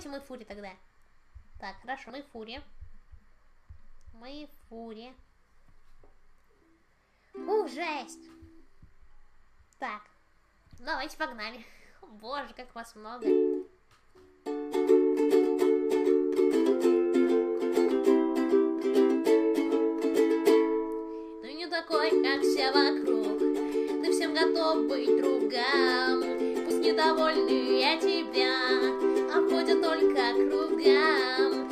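Compressed frames skipped at 2.09 s and 26.7 s: the audio jumps ahead by about 50 ms, consistent with two lost 26.1 ms codec frames. Unlike a dropout, there is no silent gap.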